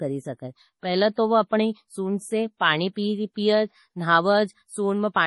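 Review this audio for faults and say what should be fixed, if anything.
Throughout the speech, the top end stops sharply at 11.5 kHz, and weak high-frequency detail flickers in and out, giving a watery, swirly texture with smeared consonant attacks. This is likely heavy MP3 compression, consistent with a low bitrate around 32 kbps, where the encoder discards treble and zeroes quiet frequency lines frame by frame. On a spectrogram this appears as a flat ceiling at 11.5 kHz with patchy, blocky holes beneath it. Keep an uncompressed or high-bitrate master and avoid low-bitrate MP3 encoding.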